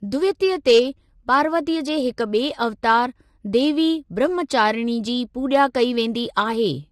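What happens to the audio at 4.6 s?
At 4.6 s the speech sounds rough and grainy with noise between harmonics and a lowered or synthetic top band, likely low-delay AAC compression at about 32 kbps, present throughout.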